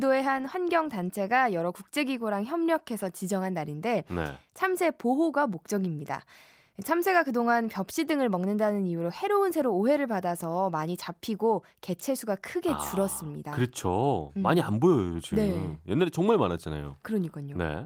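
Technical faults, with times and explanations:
No technical faults are audible in this speech recording.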